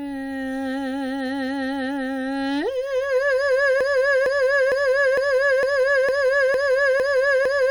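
From 3.81 s, the player or stream has likely stalled and kept resending the last fragment it held, a broken-record loop. The music stops moving forward and a 0.46 s slice repeats exactly, back to back, nine times, and it runs right to the end of the clip. Whatever music should have followed 3.81 s never arrives; that stretch is simply lost.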